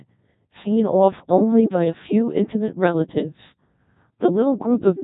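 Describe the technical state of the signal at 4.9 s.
At 4.9 s the speech carries Codec 2 vocoder damage, present throughout: sine-wave resynthesis, consistent with roughly 1.2 kbit/s, sounds robotic and buzzy; spectrograms show nothing above 3.8 kHz.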